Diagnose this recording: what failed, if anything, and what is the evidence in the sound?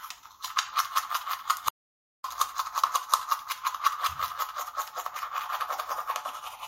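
At 1.69 s the sound cuts off abruptly into dead digital silence, with no room tone at all, and it resumes mid-flow at 2.24 s. This audio dropout to silence removes about 0.55 s of material. Likely the input device or link dropped while the recorder kept writing zeros.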